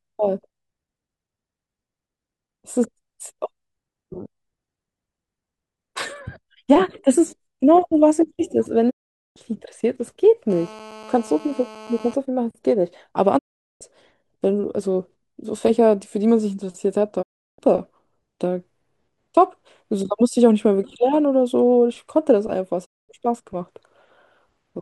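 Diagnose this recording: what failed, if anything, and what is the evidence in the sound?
The stage is digital reception. The speech cuts to silence at 8.89–9.38, 13.37–13.83, 17.21–17.60 and 22.84–23.11 s, each with a 20 ms fade. The receiver muted whole failed frames, consistent with 32 ms frames. The waveform shows flat gaps, and the spectrogram shows blank vertical columns. This is a digital broadcast dropout.

The stage is analogue wiring. A hard, raspy GSM phone buzz sits about 21 dB below the speech from 10.50 to 12.14 s. It is steady, as during a call. The circuitry rectifies the phone's 217 Hz transmit bursts. On the spectrogram this appears as a dense comb of 217 Hz harmonics. On the waveform it appears as regular pulses.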